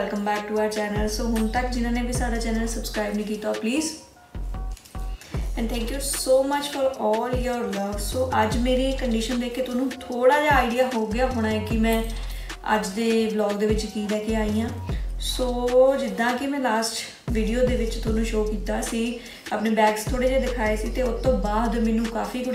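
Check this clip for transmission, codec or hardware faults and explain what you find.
Nothing stood out on listening.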